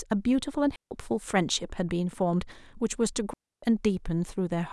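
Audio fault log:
0.76–0.91 s and 3.33–3.63 s, digital wireless dropout: the receiver lost too much of the incoming data stream and muted its output, for about 150 ms and then 290 ms, leaving clean holes of near silence in the speech, with no noise burst either side.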